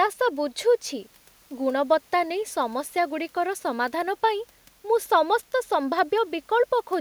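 A speech recording with nothing technically wrong to report, so there are no fault times or causes to give.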